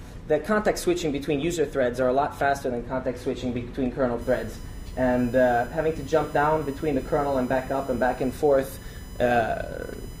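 USB whine from 4.21 s onward: 1 ms bus-frame current leaking through power or ground adds a steady 1 kHz whine, strongest at 5 kHz, roughly 25 dB down.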